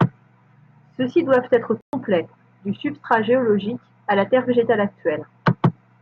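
A speech recording with a playback stall from 1.81 to 1.93 s, just after "doivent être": the sound stops mid-flow and the output sits silent for 120 ms before continuing. The likely cause is the player running short of data or having its thread blocked until it caught up. What separates this from a momentary dropout or click is its length: 120 ms is a clearly audible hole in the audio rather than a tick.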